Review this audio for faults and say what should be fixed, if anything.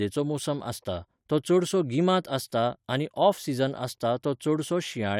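No faults turn up in this audio, so nothing needs to be fixed.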